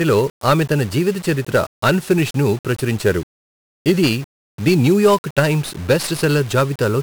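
From the first moment to the end, the speech carries heavy 1-bit DFPWM compression. Each sample is reduced to a single up-or-down step, so strong broadband noise fuzzes everything, with a rate that fits about 48 kbps. Unlike perceptual codecs, nothing is swirly. Everything sounds fuzzy and crackly, and the treble loses its clarity.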